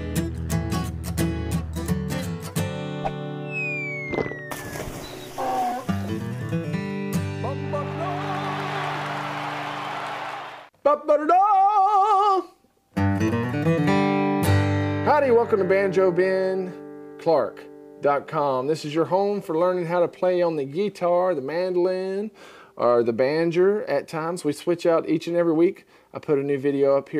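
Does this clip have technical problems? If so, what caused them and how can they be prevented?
No, there are no technical faults to point to in this clip. Nothing in it calls for a cause to trace or a fix to prevent.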